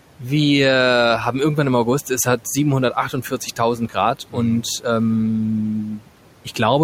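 The noise suppressor mistook parts of the speech for background and turned them down at 0.19, 3.07, 3.76 and 5.85 s, each for roughly 0.1 to 0.15 s. This speech cut by the noise suppressor sounds swallowed, dipping by about 9 to 13 dB, deepest at 5.85 s.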